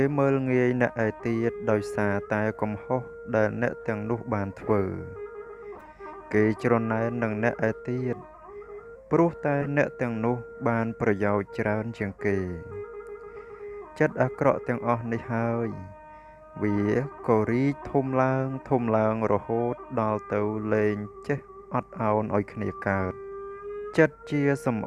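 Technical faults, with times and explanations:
4.68–4.70 s, 5.75–5.90 s, 9.61–9.68 s, 18.60–18.64 s: corrupt frame decoded. Damaged compressed frames were played anyway, so misread gains and codes put energy at wrong frequencies, heard as brief chirps or blips peaking around -15 to -40 dBFS. A spectrogram shows short, frame-wide patches of stray energy.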